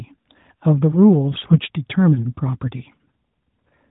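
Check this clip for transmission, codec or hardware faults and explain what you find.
One transmission fault stands out in this speech clip. The audio comes through the AMR narrowband mobile codec, so nothing above 4 kHz is present.

From 1.32 to 1.60 s the speech turns hoarse, scratchy and gargly, though its pitch and loudness stay roughly in place. These are AMR bit errors. On a weak radio link, some bits in the less protected part of each frame arrived flipped, around 7 percent of them. The check on the important bits still passed, so the decoder used the damaged frames. Its excitation pulses landed in the wrong spots, and the finer pitch, gain and spectral values drifted. The span fits about a dozen corrupted 20 ms frames.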